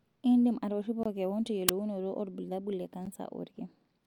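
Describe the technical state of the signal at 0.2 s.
Nothing is wrong with the signal at 0.2 s; the speech passes through intact at that moment, with no audible dropout, distortion or other technical fault.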